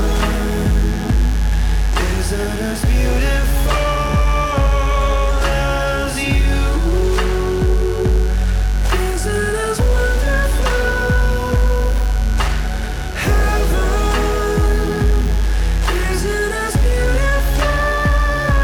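A mains buzz runs through the whole recording from start to finish: switching spikes from a dimmer, rectifier or poorly shielded cable have leaked into the signal path, arriving twice per cycle of a 50 Hz supply. Because the spikes are sharp, they carry a dense comb of 50 Hz harmonics stretching up into the kilohertz range. The result is a constant, raspy buzz sitting roughly 20 dB below the wanted sound.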